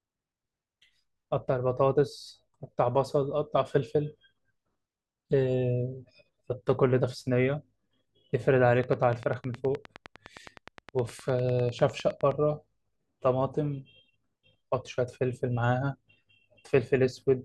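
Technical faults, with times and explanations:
8.84 to 12.32 s, train of clicks: a likely source is interference from nearby equipment or a faulty connection or power supply injecting a pulse about 10 times a second, so around forty evenly spaced, same-shaped clicks tick over the speech and its pauses, peaking a few dB above it.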